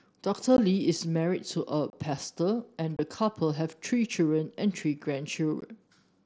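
Speech with abrupt dropouts at 0.57 s, 1.90 to 1.93 s, 2.97 to 2.99 s and 5.61 s, each about 15 to 30 ms long, heard through a wideband mSBC headset link. The dropouts come from unconcealed Bluetooth headset packet loss: voice packets between headset and phone went missing and were replaced by silence or an idle pattern rather than patched over.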